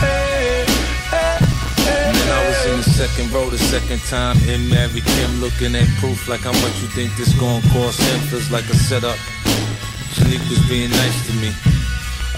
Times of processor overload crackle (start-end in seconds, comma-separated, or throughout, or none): 1.37-1.73, 9.47-10.44